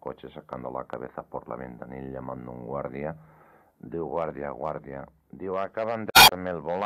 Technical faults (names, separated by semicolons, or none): damaged data in a compressed stream